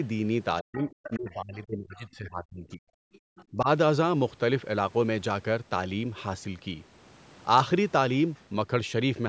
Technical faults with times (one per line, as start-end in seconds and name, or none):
0.61-2.87 speech suppressed in double talk
0.73-1.16 other side's voice leaking through
1.96-2.02 other side's voice leaking through
3.13-3.44 other side's voice leaking through
3.19-3.23 background gated by the echo canceller
3.51-3.68 speech suppressed in double talk
8.36-8.42 other side's voice leaking through